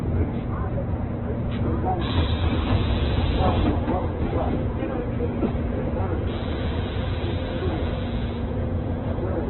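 From start to finish the sound is band-limited, with nothing above about 4.1 kHz, and heavily degraded in a way consistent with Opus compression, likely in its music (CELT) mode at a very low rate, which fits roughly 8 kbps. With so few bits, band energies survive but their fine detail is filled in by folded or synthetic content, so tonal parts come out grainy, rough and noisy rather than swirly. The narrow bandwidth leaves everything dull and muffled.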